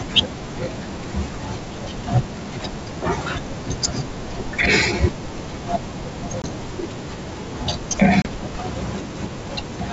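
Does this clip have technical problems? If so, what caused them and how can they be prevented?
Yes, there's packet loss on an ADPCM call, with two hard-edged dropouts in the speech, at 6.42–6.47 s and 8.22–8.27 s. About 20 ms goes missing in the first and 30 ms in the second, which sounds like about two packets in the first and three in the second. The gaps get filled with silence, and the decoder's predictor and step size lose track of the sender's, so the audio comes back slightly distorted before settling. Better jitter buffering, packet-loss concealment, or forward error correction on the link would prevent it.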